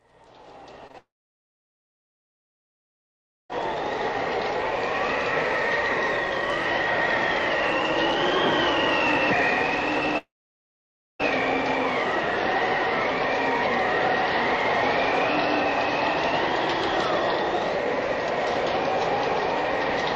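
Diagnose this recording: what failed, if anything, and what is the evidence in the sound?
Network stage. Short concealed packet loss occurs at 0.87 s and 0.92 s, in two back-to-back gaps of about 20 ms each. The receiver covered each hole by extending the preceding sound, then blended back into real audio. The result is a brief smear or wobble.

Network stage again. The audio breaks off from 0.98 to 3.51 s and from 10.18 to 11.21 s. The likely cause is a long network dropout. The last sound is briefly continued and fades. Silence follows for about 2.4 s and 0.9 s. Audio then resumes without the lost stretches.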